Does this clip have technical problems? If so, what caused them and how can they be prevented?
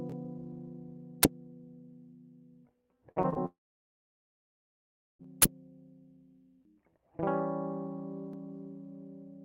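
Yes. Uninitialised buffer: at 1.23 s and again from 5.42 to 5.44 s, a block was sent to the output before any audio had been written to it, so leftover memory was played as samples. Each is a short, harsh burst of digital noise cutting through the music. The first fits a 512-sample buffer (about 12 ms), the second a 1024-sample one (about 23 ms). To prevent it, zero every buffer when it is allocated and output silence whenever a block isn't filled in time.

Repeated packet loss (robotic sound): between 3.11 and 3.37 s, audio data kept failing to arrive. The receiver patched four holes, the longest 48 ms, by stretching the last sound, so roughly two-fifths of that stretch is fill. The music turns choppy, with pieces missing. To prevent it, use a deeper jitter buffer and add forward error correction or redundancy so isolated losses can be rebuilt.

Long network dropout: from 3.45 to 5.21 s, the stream stopped arriving, likely because of a network outage. 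There is only a brief smeared continuation of the last sound, then about 1.6 s of silence. The music resumes later with that whole section gone. To prevent it, give the link more headroom and use a connection that can fail over or reconnect quickly, with enough buffering to ride out short outages.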